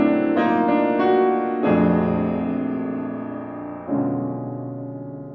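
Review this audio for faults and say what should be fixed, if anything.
Nothing here needs fixing.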